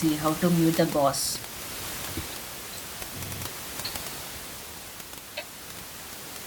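At 3.25 to 3.45 s, repeated frames make the same 96 ms of speech play twice more. The stutter replays identical audio instead of leaving a gap, adding 192 ms.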